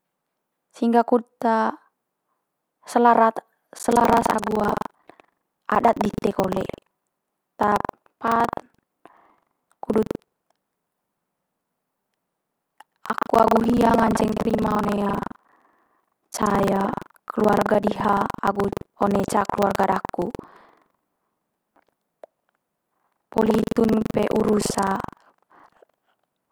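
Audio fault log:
3.76–26.52 s, buffer tearing: steady robotic 23.4 Hz buzz over the speech. Write and read pointers cross inside each buffer, so about a fifth replays audio roughly 150 ms old.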